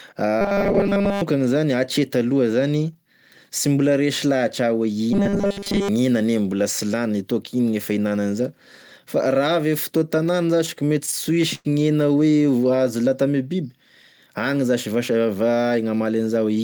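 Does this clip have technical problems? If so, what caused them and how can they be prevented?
Yes. Between 0.41 and 1.22 s and again between 5.13 and 5.89 s, the speech turns into a rigid 200 Hz robotic buzz. This is likely robotic sound from repeated short buffers, with 5 ms chunks looped in place of most of the real audio. A spectrogram shows evenly spaced 200 Hz harmonic stripes. Delivering audio on time, with larger or more stable device buffers, prevents it.

From 10.17 to 11.67 s there are repeated stalls (stutter). The jitter buffer ran empty 15 times, and about 228 ms was filled with continued sound, the longest gap lasting 99 ms. The waveform shows repeated and fading segments, with nothing lost. A deeper adaptive jitter buffer and steadier network delivery prevent it.

From 15.14 to 15.79 s, a jitter buffer speed-up plays the audio at 112% without changing pitch by cutting out about 100 ms in small pitch-period pieces. 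The waveform shows periods missing at the splice points. Avoiding bursty packet arrival, or trimming the buffer more gradually, prevents it.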